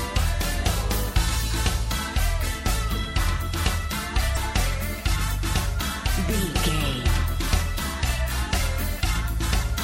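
Throughout, the audio sounds watery and swirly, with dulled treble and smeared attacks, most likely from MP3 compression at a low bitrate such as 64 kbps. Damaged data in a compressed stream throws the decoder out of sync from 4.33 to 4.37 s and again at 7.07 s, each heard as a brief glitch.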